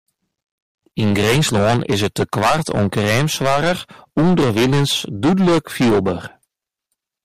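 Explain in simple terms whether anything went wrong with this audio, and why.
Hard clipping runs through the whole speech clip: the signal was far too loud for the recording, so about one sample in seven had its peaks chopped flat, giving harsh fuzz rather than gentle, rounded distortion.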